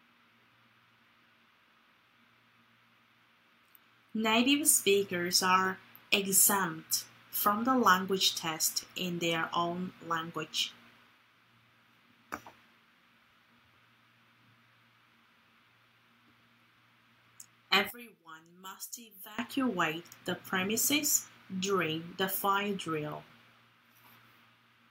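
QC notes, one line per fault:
17.90 to 19.39 s, one channel inverted: the level falls by about 21 dB. Centred content nearly vanishes, leaving a faint residue. One stereo channel is likely polarity-reversed here, so material common to both cancels when they are summed to mono.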